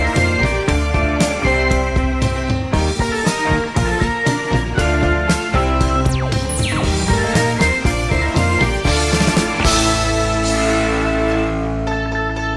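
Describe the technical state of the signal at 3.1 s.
Around 3.1 s the signal is intact, with no audible fault at that moment.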